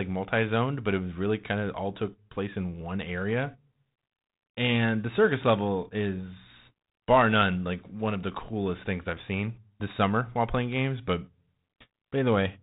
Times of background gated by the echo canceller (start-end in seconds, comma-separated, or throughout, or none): none